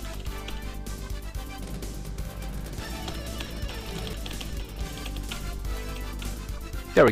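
From 2.24 to 6.34 s, a doubled audio track appears. A second copy trails about a second behind, somewhat quieter. It likely comes from a slower capture path.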